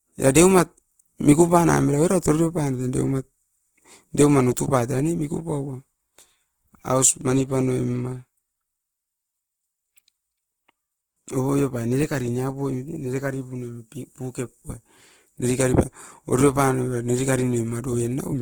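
From start to finish, the speech carries plainly audible Opus compression damage, likely from the codec running in its CELT music mode at a low rate, which fits a 16 kbps stream. Short of bits, the encoder preserves each band's overall energy but fills the fine detail with folded copies of lower bands or with noise, so voiced sounds come out grainy and rough rather than swirly. Bandwidth stays full, with content reaching about 20.2 kHz.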